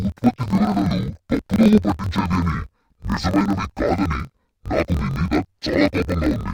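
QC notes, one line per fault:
Throughout: interleaved audio read as planar. The speech sits an octave low, doubled and choppy. Each 24 ms block of alternating left and right samples is split into a first half taken as left and a second half as right, so each half plays at half speed while the overall pace holds. The spectrogram shows harmonics at half their normal spacing with vertical seams every 24 ms, a 41.7 Hz block rate. The waveform shows matching block-periodic discontinuities.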